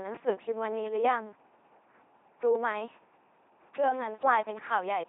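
Speech runs through an LPC-10 vocoder throughout, heavily damaged. Each moment is resynthesised as pure buzz or pure noise through a short all-pole filter, giving a mechanical robot voice that fits a 2.4 kbit/s coder. A spectrogram shows rigid harmonic combs, noisy patches, and nothing above 3.8 kHz.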